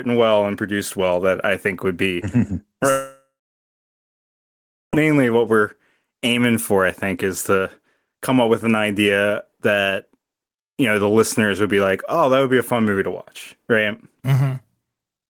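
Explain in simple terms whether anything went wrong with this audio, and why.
Yes, something went wrong. At 2.90 seconds the speech cuts out. A short fading buzz follows, then about 1.7 seconds of silence. The speech returns at 4.94 seconds with "what we're aiming for". This is likely a long network dropout, and about 2 seconds of speech were lost.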